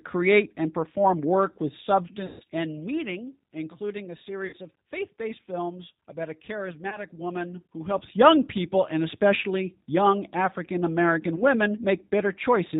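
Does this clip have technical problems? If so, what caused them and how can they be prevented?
Yes. The whole clip is speech carried through the G.729 codec, plainly audible at 8 kbit/s. Rebuilding each 10 ms frame from a vocal-tract filter, pitch predictor and a few pulses removes everything above 4 kHz and leaves the voice rough and slightly synthetic. Prevent this by negotiating a wideband codec such as G.722 or Opus on the call.

VoIP packet loss concealed by the speech codec occurs four times: 2.26–2.43 s after "and perform work with", where 140 ms is missing; 4.47–4.56 s between "including a" and "of faith based films", with 60 ms missing; 6.90–6.98 s after "based films about a"; and 11.36–11.43 s, the last two 20 ms gaps each. The decoder stretches its last pitch and filter state into a buzzy tone or coloured noise that fades, and the voice stays weak briefly after packets resume. 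The gap lengths fit 20 ms packets. Prevent this with a jitter buffer, QoS marking for voice traffic, or forward error correction on lossy links.

Zipper noise runs from 7.25 to 8.17 s. The level moves by about 10 dB in 2 dB jumps, roughly seven per second, and each unsmoothed jump clicks, producing a ticking texture over the speech. Prevent this by ramping gain per sample or smoothing it across each buffer.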